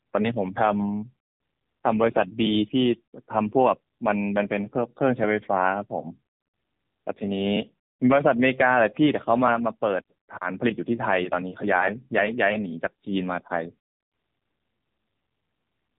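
Throughout the speech, the AMR narrowband mobile codec is plainly audible. Nothing above 4 kHz survives, so the sound is dull and boxed-in, and the low bit budget, consistent with the 7.4 kbps mode, leaves a buzzy, synthetic edge on every syllable. The buzz is what separates it from a simple low-pass filter. A filter would only remove the top end, while this codec rebuilds the voice from a vocal-tract model excited by sparse pulses.

From 14.40 to 14.42 s, lost AMR speech frames cause a short glitch lasting about 20 ms, which points to a single dropped frame. The decoder fills the gap by repeating the previous pitch and vocal-tract settings at reduced gain, so a brief dip or warble is heard rather than silence. A burst of lost packets would instead produce a drawn-out fade. This is also unlike a hard digital dropout, because the gap is smoothed over.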